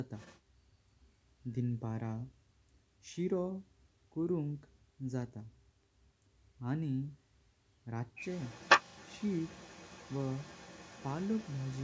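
Other side's voice leaking through appears from 0.16 to 0.4 s and again from 8.16 s to the end: a faint second voice about 20 dB under the speech, likely loudspeaker playback that the echo canceller failed to fully remove from the microphone.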